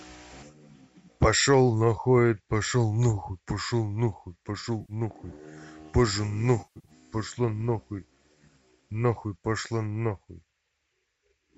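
Speech, with two patches of AAC frame loss with concealment in what is likely a low-delay AAC stream. At 4.81 to 4.93 s, about 80 ms goes smeared and noisy. At 6.6 to 6.9 s, gaps scattered over 260 ms, the longest roughly 100 ms, sound phasey and broken. The decoder fills each gap by rebuilding it from the last good spectrum.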